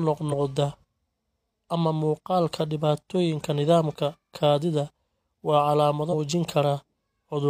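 Compressed frames skipped at 0.28 s and again at 6.09 s in this speech clip: whole blocks of coded audio never reach the output, either missing or rejected by the decoder as damaged, so playback jumps forward. The first jump loses about 50 ms, one frame; the second loses about 150 ms, roughly three frames, which fits a frame of about 46 ms.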